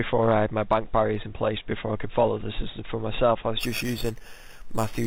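From 3.61 s to the end at 5.06 s, there is imaging from sample-and-hold upsampling. The sound was raised from an 8 kHz rate to 48 kHz by repeating each sample, with no smoothing filter. Mirror copies of the spectrum therefore sit around each multiple of 8 kHz. The lowest copy falls between 4 kHz and 8 kHz, about 13 dB below the signal. It is heard as a bright metallic fizz that rises and falls with the sound.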